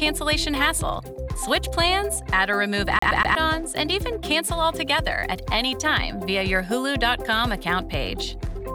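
From 2.99 to 3.35 s the audio is a CD stuck on one turn: a fixed 121 ms slice plays three times with brief mutes at each jump, an even stutter rather than irregular dropout repeats. From 4.58 to 6.08 s, grainy distortion about 45 dB below the signal follows the sound and vanishes in silence, likely from low bit depth without dither, roughly 9-bit truncation.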